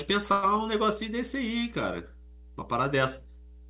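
Mains hum runs through the whole clip, a steady 60 Hz tone sitting roughly 20 dB below the speech. It comes from the power line leaking into the signal, most often through a ground loop or a transformer close to the cabling. It is heard as a constant low drone with a few low harmonics above it, present under the talking and in the pauses alike.

A call audio freeze occurs from 0.32 to 0.45 s. For about 106 ms the sound stalls and the last fragment is stretched into a brief fading buzz or hiss rather than dropping to silence. When the audio resumes it picks up exactly where it stopped, so nothing is lost, but everything after this point lands about 0.1 s later. The likely cause is late network packets draining the jitter buffer. The band stops at 4 kHz, which fits a narrowband G.711 call.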